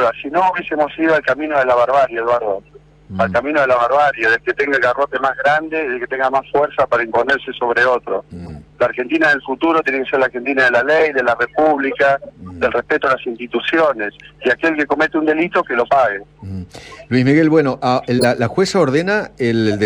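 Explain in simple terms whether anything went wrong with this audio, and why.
Corrupt frame decoded at 8.44–8.52 s, 13.43–13.46 s and 18.19–18.25 s: damaged compressed data played anyway, causing brief squeaks or noise bursts, the last one loudest.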